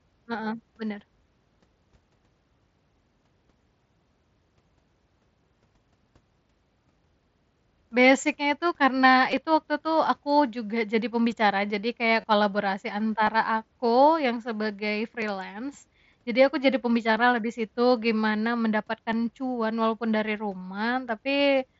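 Speech carrying a regular click about every 1.95 s from 1.55 s to 21.09 s, roughly ten in all; the likely cause is clock drift buffer slips, where two devices' clocks disagree by around 300 ppm and a few dozen samples slip each time. Brief buzzy holds at 9.31 s and from 12.21 to 12.24 s, each ending in a slight warble, are concealed Bluetooth headset packet loss, where missing frames were patched by repeating recent waveform for about 15 ms and 30 ms. Both sit over the mSBC headset link, whose speech bandwidth reaches up to 8 kHz.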